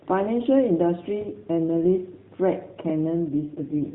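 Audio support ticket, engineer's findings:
AMR rate drop, 3.31 s to end: speech turns buzzier and more synthetic, fitting a mode switch from 12.2 to 4.75 kbps. Same narrowband ceiling, no gap, unlike packet loss.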